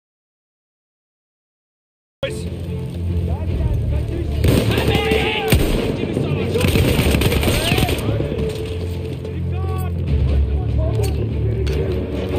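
Audio dropout to silence runs from the very start of the clip until 2.23 s: the file opens in complete silence, with no room tone or background at all, and sound only enters abruptly at that point, already in mid-flow. The likely cause is that the input was lost, through a disconnected source, a failed link or a mute, while the recorder kept writing silence, so whatever came before 2.23 s is missing.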